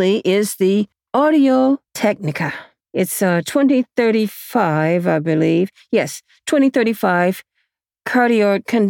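No technical faults can be heard.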